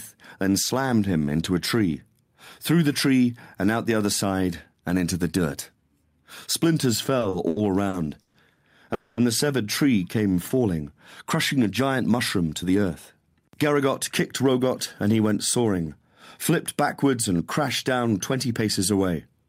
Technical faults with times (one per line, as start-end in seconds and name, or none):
7.19-8.37 repeated stalls (stutter)
8.94-9.20 call audio freeze
10.16-10.60 jitter buffer slow-down
12.47-14.43 jitter buffer speed-up